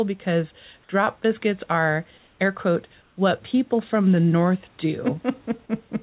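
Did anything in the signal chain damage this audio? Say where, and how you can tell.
Yes, comfort noise in place of the background during call processing: from 2.18 to 2.39 s and 3.02 to 3.17 s, the room noise turns steady and featureless and drops about 1 to 2 dB, likely from discontinuous transmission. Unlike a dropout, the pauses never fall silent.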